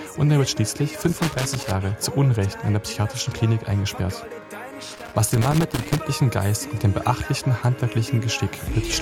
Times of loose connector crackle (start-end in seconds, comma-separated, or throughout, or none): 1.02-1.74, 4.95-6.01